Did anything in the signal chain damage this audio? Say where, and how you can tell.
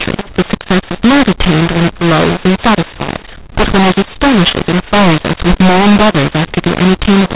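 Yes. At the codec, mu-law and A-law were mixed up throughout: mu-law bytes decoded as A-law scramble levels, giving harsh speech and noise-filled pauses, unlike clipping, which leaves silences clean.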